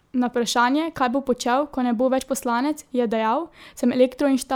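Speech clip with one case of compressed frames skipped at 2.18 s: about one 26.1 ms frame goes missing, so the audio jumps ahead.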